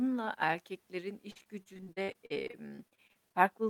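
From 1.31 s to 3.36 s the speech breaks up with repeated packet loss, giving a robotic sound. Around two dozen short holes appear in close succession, the longest about 57 ms, and each is patched by stretching the preceding sound, so roughly a quarter of that stretch is filler. Unlike a single dropout or a lone click, the damage recurs steadily, turning the speech choppy, with fragments missing.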